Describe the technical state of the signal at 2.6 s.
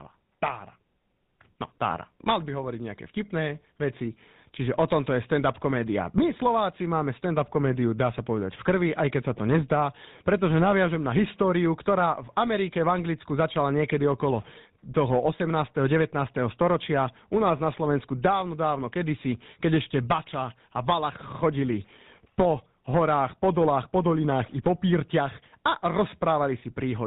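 At 2.6 s the speech carries the GSM full-rate codec damage present through the whole clip, and it is plainly audible. The codec rebuilds the voice from a vocal-tract model driven by a sparse, regularly spaced pulse excitation, discarding two of every three excitation samples and passing nothing above 4 kHz. The result is a dull, band-limited sound with a buzzy, gravelly roughness, consistent with the 13 kbit/s full-rate scheme.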